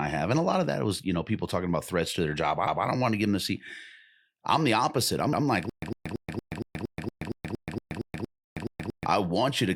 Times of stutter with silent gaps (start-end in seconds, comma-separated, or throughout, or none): 5.70-9.06